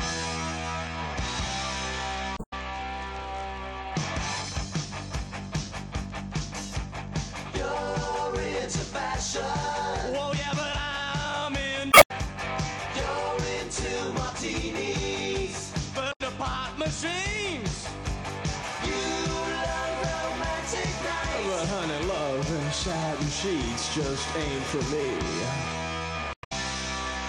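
Damaged data in a compressed stream appears at 2.34–2.53 s, 11.89–12.11 s, 16.09–16.21 s and 26.31–26.52 s. Corrupted bytes make the decoder misread frames and lose sync, so each stretch breaks into a brief chirp, squawk, click or short hole lasting roughly 0.1 to 0.2 s.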